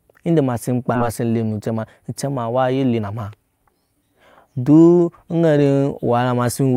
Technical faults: skip ahead; jitter buffer speed-up

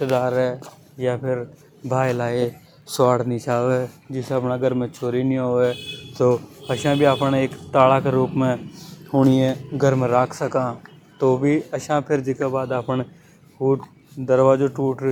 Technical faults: none

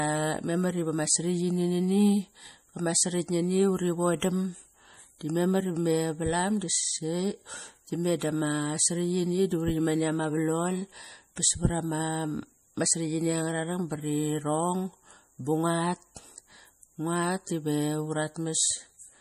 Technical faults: MP3 compression

